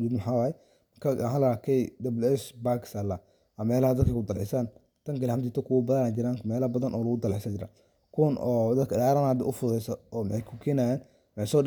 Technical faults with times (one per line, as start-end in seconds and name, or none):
none